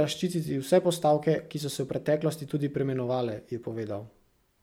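A speech recording with no technical faults to report.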